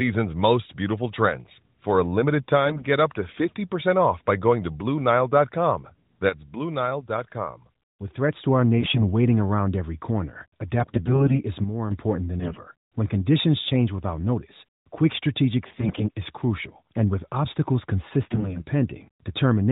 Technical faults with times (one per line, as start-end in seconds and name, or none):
2.66-2.86 AMR bit errors
6.29-8.46 sudden gain jump
8.78-9.04 AMR bit errors
10.78-11.42 AMR bit errors
12.40-12.62 AMR bit errors
15.76-16.04 AMR bit errors
18.22-18.65 AMR bit errors